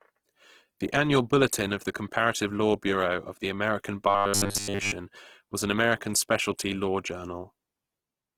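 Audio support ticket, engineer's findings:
Whole clip: speech comes through grainy and rough, tones turning noisy rather than swirly, damage plainly audible. Likely Opus compression in its music mode, with bands backfilled by folded or noise content when bits run short. Sound fits roughly 16 kbps, fullband.

4.08 to 4.92 s, just before "was an": rigid metallic buzz locked at 100 Hz, the classic robotic sound from repeated short buffers. Likely a starved playout buffer re-playing the last 10 ms chunk, so most of that stretch is repeats and the real audio is skipped.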